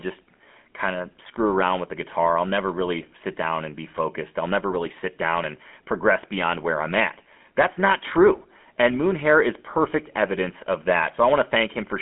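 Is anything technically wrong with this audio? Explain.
Yes, the speech has passed through a GSM full-rate codec throughout. It models the vocal tract with sparse pulse excitation, fitting roughly 13 kbps, leaving buzzy, gravelly roughness. Spectrograms show a band near 200 Hz to 3.4 kHz, empty above 3.8 kHz.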